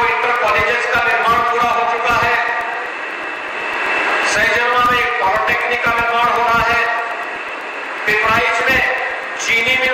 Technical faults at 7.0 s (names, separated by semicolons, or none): periodic USB or driver dropouts